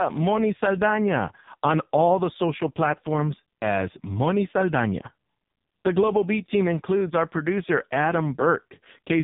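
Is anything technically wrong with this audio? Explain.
Yes. Throughout the clip, the speech sounds buzzy, thin and synthetic, like a poor mobile call, with nothing above about 3.8 kHz. This is AMR narrowband mobile codec damage, and it is heavy. The codec samples at 8 kHz and rebuilds the voice from a vocal-tract model driven by a few pulses in each short subframe. At very few bits that model rebuilds the voice crudely, which fits one of AMR-NB's lowest modes, near 5 kbps.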